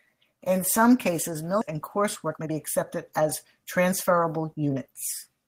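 Speech, with a skip ahead at 1.61 s right after "some cases": about a second of audio vanishes and the two sides join with no silence, which separates it from a dropout that leaves a gap. It is typical of a jitter buffer discarding queued audio after overflowing. From 1.71 to 4.70 s a jitter buffer speed-up follows. The receiver trims short pitch-period pieces repeatedly, removing around 0.4 s, so speech runs at 112% and sounds hurried. Unlike a resampling error, the pitch stays unchanged.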